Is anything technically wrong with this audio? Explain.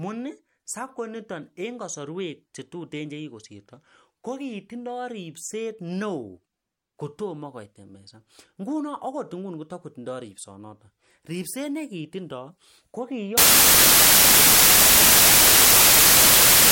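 Yes. From 13.38 s to the end at 16.71 s, the speech gives way to samples built from the wrong bytes. The reader assembles each sample with its bytes misaligned or in swapped order, so the rapidly fluctuating low-order bits land in the most significant position. The result is loud, broadband hiss. A waveform shows a dense block, and a spectrogram shows flat energy across all frequencies.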